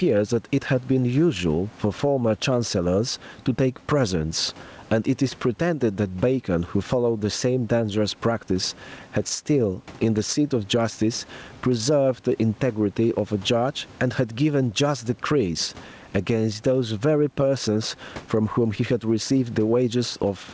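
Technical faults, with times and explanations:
throughout, gain pumping. The room noise sits about 37 dB below the speech. The swing is around 15 dB. Loud and quiet passages end up close in level, so the sound is squashed and seems to breathe. The likely cause is input gain set far too high, with a fast limiter or compressor pulling it down on each peak and letting go between them.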